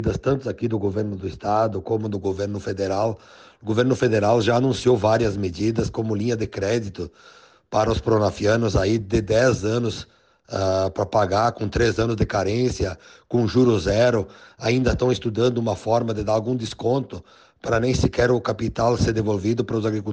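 From the start to 2.0 s the audio shows de-emphasis applied wrongly: a treble-cutting filter meant to reverse pre-emphasis has acted on material that never carried that boost, or has been applied twice. The highs therefore roll off steadily, with 10 kHz sitting about 14 dB below 1 kHz, so the sound is dull and muffled. A spectrogram shows the upper bands fading smoothly toward the top, with no sharp cutoff edge, while the waveform looks rounder and less spiky.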